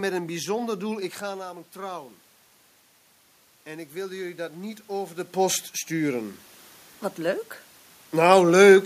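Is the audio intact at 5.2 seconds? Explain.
No. From 3.64 to 6.41 s the automatic gain rising fault is under way: after the input dropped by about 12 dB, the gain control slowly adds about 5 dB, so voice and room noise swell together. The waveform envelope and the spectrogram's noise floor brighten gradually.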